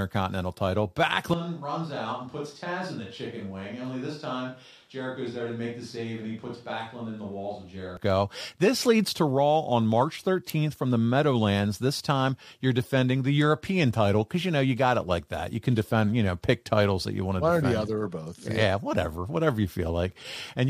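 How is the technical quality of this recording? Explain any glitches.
The recording has one clear glitch. From 1.34 to 7.97 s there is a switch to a distant microphone, likely the close mic's signal dropping out. The speech turns suddenly hollow and roomy, thinner in the bass, about 10 dB quieter, with room noise around 35 dB below it. Unlike a simple level drop, the tone and reverberation change abruptly too.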